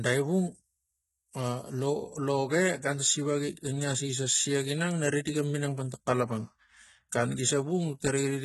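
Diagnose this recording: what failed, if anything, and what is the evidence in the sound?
Codec stage, likely HE-AAC compression. Its copied-up treble makes s sounds gritty, metallic throughout. Nothing survives above 11.8 kHz. Heavy damage fits 16 kbps.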